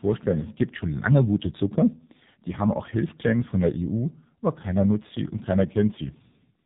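From start to finish the speech carries heavy AMR narrowband mobile codec damage. There is nothing above 3.8 kHz, and the low-bitrate vocal-tract model leaves voices buzzy and synthetic, which fits a rate near 5.9 kbps.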